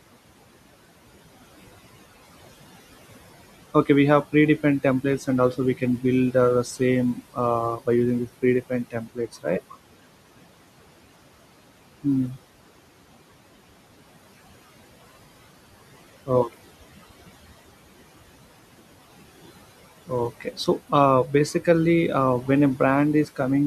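Throughout the speech, the background sinks away between phrases and swells back under them: noise suppressor artifacts, with the room noise (about 18 dB below the speech) pulled down by about 17 dB, frame by frame. From 8.91 to 9.46 s, just after "using these predefined", part of the speech goes swallowed and faint for roughly a third of a second. Again from 20.4 to 20.68 s, just before "uh basically uh", a brief stretch dulls. These are speech cut by the noise suppressor, which mistook quiet speech for noise and lowered it by about 17 dB and about 11 dB respectively.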